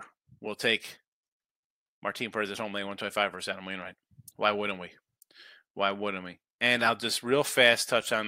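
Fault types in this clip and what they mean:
Clock slip clicks: faint, evenly spaced ticks run through the speech from about 0.23 s to 8.27 s, roughly every 0.15 s, about seventy in all. They likely come from two unsynchronised clocks differing by around 200 ppm, each slip dropping or repeating one sample. The steady spacing and the absence of any ticks in pauses set them apart from random dropout clicks.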